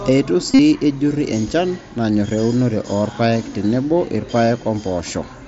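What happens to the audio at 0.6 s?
Concealed Bluetooth headset packet loss runs from about 0.51 to 0.59 s, just before "ejurri enchan". Nearly all of that 75 ms stretch is missing, and the longest unbroken gap lasts 45 ms. That pattern fits about nine lost frames. The receiver fills each gap by repeating the closest-matching piece of recent waveform. Over the longest gap, this becomes a buzzy, steady tone at full level. A slight warble follows as the real sound resumes on the mSBC headset link.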